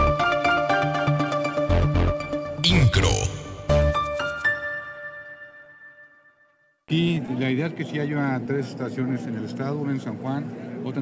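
From 4.96 to 7.3 s the audio stutters with repeated stalls. Dozens of tiny gaps, none longer than 17 ms, are filled by continuing the last sound, so the audio drags. From 8.1 to 9.15 s a jitter buffer slow-down stretches the audio to about 92% speed at unchanged pitch, adding 86 ms to rebuild the buffer's reserve.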